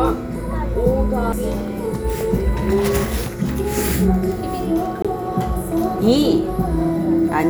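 The player's laser twice jumped to another turn of the disc spiral, a CD skip, each time muting briefly and resuming elsewhere: a tiny gap at 1.32 s and a longer one from 5.02 to 5.05 s, each heard as a tick or short gap with the sound abruptly displaced.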